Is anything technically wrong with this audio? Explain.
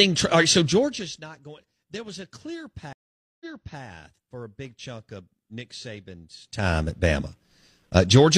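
Yes. From 2.93 to 3.82 s there is a stream reconnect. The connection dropped, leaving about 475 ms of silence, then a fresh decoder resumed the speech roughly 418 ms earlier than where it broke off, so a short stretch is heard twice.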